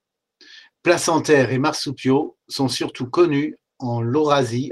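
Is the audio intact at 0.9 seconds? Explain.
Yes, the speech at 0.9 seconds is intact, with no audible fault at that moment.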